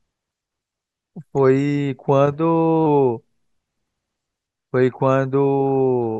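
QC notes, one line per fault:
2.34–2.86 s, drift correction step: the speech suddenly plays about 5.7% fast and rises nearly a semitone, roughly 96 cents, then snaps back. Speed and pitch shift together. This is likely clock-matching software stepping up its playback rate to drain its buffer.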